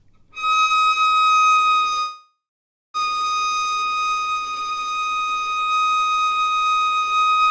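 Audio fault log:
2.00–2.97 s, call audio freeze: the sound stalls. Its last moment continues as a fading buzz, then about 0.57 s of silence. Playback resumes where it stopped, nothing missing, now about 0.94 s late. Likely cause: delayed packets emptied the jitter buffer.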